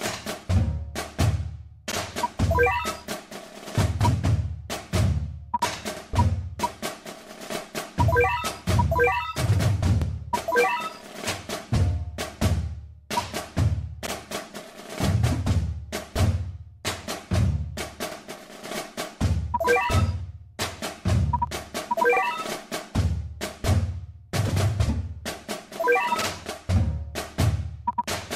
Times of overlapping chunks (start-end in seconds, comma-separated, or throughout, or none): 1.92-1.97, 5.97-6.02, 10.02-10.07, 14.07-14.12, 18.12-18.17, 22.17-22.22